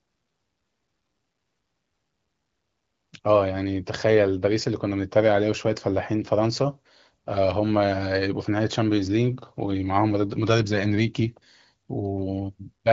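Nothing stood out on listening to this speech, which comes through an AMR wideband (HD Voice) path whose clarity fits one of its upper rates, around 16 kbit/s.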